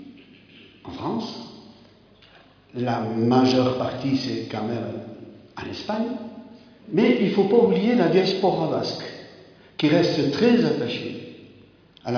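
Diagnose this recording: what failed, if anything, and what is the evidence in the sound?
Nothing failed; no fault is audible anywhere here.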